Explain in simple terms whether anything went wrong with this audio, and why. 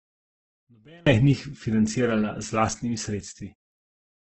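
Two things went wrong. For the first second, to about 1.07 s, the speech almost disappears when played on a single speaker. That fits one channel inverted. One side is flipped upside down, so the two sides cancel and only a faint trace remains.

Across the whole clip the speech sounds rough, grainy and somewhat dull. Nothing is heard above about 8 kHz. This is likely Opus compression, squeezed very hard. Opus keeps the overall loudness but fills missing detail with noise.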